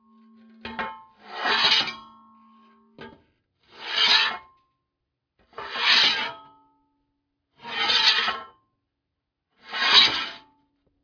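Nothing stood out as a technical fault anywhere in this recording of sounds when listening through it.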